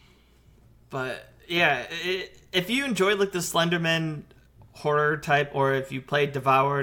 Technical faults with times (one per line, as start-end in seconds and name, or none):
none